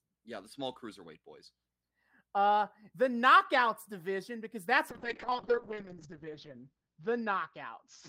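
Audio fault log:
4.9–8.08 s, call bitrate drop: after "knockouts division because that's" the speech turns coarse and watery, and the top end closes from 20 kHz to 8 kHz. This suggests the encoder was throttled from around 40 kbps to about 7 kbps. It bottoms out for 1.17 s and doesn't recover before the end.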